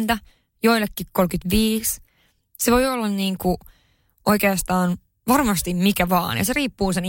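No technical faults are audible anywhere in the speech.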